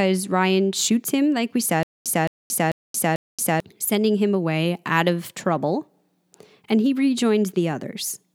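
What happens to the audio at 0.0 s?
Nothing goes wrong at 0.0 s; the speech starts cleanly, with no dropout, click or distortion at that point.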